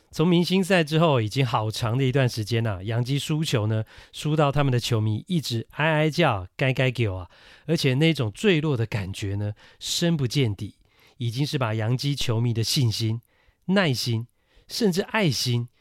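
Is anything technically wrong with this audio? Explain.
Yes. A DC step occurs at 4.57 s and again at 12.21 s: the waveform's zero line jumps by about -23 dBFS, then drains away through a roughly 2 Hz high-pass, producing a low thump beneath the unchanged speech.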